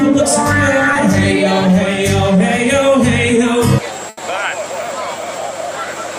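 At 0.93 to 0.97 s a short concealed packet loss fills a 20 ms hole by extending the preceding sound, leaving a brief smear. At 4.09 to 4.19 s a burst of packet loss drops 80 ms; the decoder holds and fades the last sound, visible as a decaying envelope before playback resumes further on.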